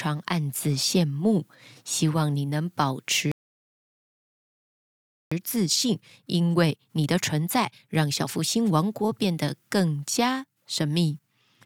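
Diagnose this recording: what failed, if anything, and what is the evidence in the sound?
The speech cuts out completely from 3.32 s to 5.32 s, a flat two seconds of silence in mid-flow before it picks up again. That's a playback stall, likely the player's buffer running dry or its thread getting blocked, so nothing reached the output until it recovered.

Right after, from 5.32 s to 8.32 s, the speech runs hurried at 1.25 times normal speed, yet the pitch stays put. That's time-compressed catch-up in playback: the player clears its backlog by snipping out small slices and cross-fading the joins.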